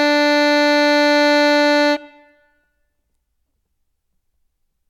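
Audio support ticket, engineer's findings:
Music signal checked across the whole clip; no technical faults found and no component action needed.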